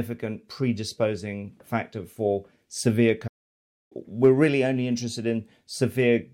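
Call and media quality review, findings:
Playback stall, 3.27 to 3.92 s. Player likely starved of buffered data or its output thread blocked; nothing written to the device for about 630 ms. Speech cuts off mid-flow into dead silence, then resumes once playback recovers. The gap reads as a freeze, not a pause in speaking.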